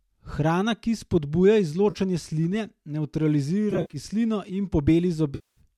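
Just after "ki spodbuja", from 1.90 to 1.97 s, a brief smeared, noisy patch replaces the sound. From 3.71 to 3.97 s, several short phasey smears are scattered over about 220 ms, the longest around 50 ms. From 5.35 to 5.61 s, the sound decays toward silence and then fades back in. All three are AAC frame loss with concealment: the decoder filled the gaps from the last good spectrum and faded it out during the longest loss. The light graininess and the roughly 10 ms frame spacing of the gaps likely point to low-delay AAC compression.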